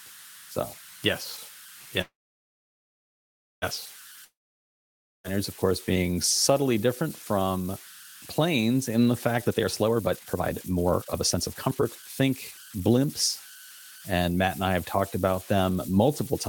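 A whistle near 1.5 kHz runs through the whole speech clip, with grainy noise under the quieter parts. These are converter idle tones. A delta-sigma converter without dither falls into repeating bit patterns when its input is small. Those patterns produce a steady tone, and its pitch depends on the input's offset. Here the error sits only about 19 dB below the signal. It is heard in the pauses.

From 2.01 to 3.64 s the sound stops. A brief fading buzz trails off, then about 1.51 s of silence follows. The audio resumes exactly where it left off. Nothing is lost, but the gap pushes everything after it about 1.61 s later. This is a call audio freeze. Packets were likely held up in transit, so the jitter buffer ran dry and the receiver had to fill the wait.

From 4.24 to 5.26 s there is another break, just before "of course being subtly". A short fading tail gives way to about 0.92 s of silence. 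This time the audio comes back further on, so about 1.00 s of speech is gone. This is a long network dropout. The audio for that stretch likely never arrived, and the receiver covered the hole with a fade and silence.

From 9.38 to 13.05 s, just after "from planes in the", the speech runs noticeably fast. It plays at about 144% speed, but the pitch stays the same. The effect is hurried. This is a jitter buffer speed-up. The buffer had built up more audio than its target. To shrink the delay, the receiver cut many short pitch-period slices in a row, removing about one and a half seconds altogether.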